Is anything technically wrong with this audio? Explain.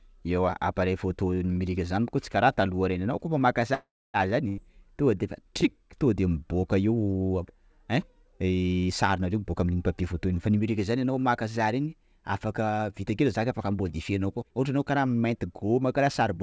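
Yes. This speech clip has three kinds of fault. It passed through a call path that fits G.722 at 64 kbps, and nothing is heard above 8 kHz.

A call audio freeze runs from 3.74 to 4.28 s, right after "reny anao koa maka". Packets were likely held up in transit, so the jitter buffer ran dry. The last sound is stretched out and fades, then about 250 ms of silence. The speech resumes with nothing lost, but about 400 ms later.

A burst of packet loss follows at 4.48 to 4.60 s, just before "tonga defa". Several packets in a row never arrived in time. The receiver extends the last sound and fades it out. Then the speech jumps ahead, with about 90 ms missing.

A jitter buffer speed-up occurs twice. The first runs from 8.81 to 10.6 s, ending just before "zany anao maka", at 109% speed. The second runs from 14.42 to 16.0 s at 115% speed. Too much audio had built up in the buffer. The receiver cut out many short pitch-period slices, about 200 ms in all each time. 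The speech sounds hurried, but the pitch does not change.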